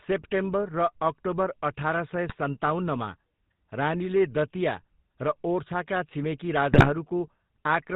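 Throughout, the speech carries the GSM full-rate codec's buzzy, gravelly texture with nothing above 4 kHz, which fits 13 kbps pulse-excited coding rather than plain band-limiting. At 2.28–2.35 s and 6.72–6.90 s, GSM bit errors corrupt decoder parameters, producing squawks and gargling that, unlike packet-loss gaps, are distorted sound rather than silence.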